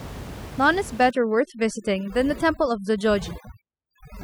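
From about 1.11 s to the end, there's overdone noise removal: the reducer's set so hard that bands near its noise estimate get cut right out, so the room noise, which sat about 15 dB under the speech, collapses into twinkly near-silence.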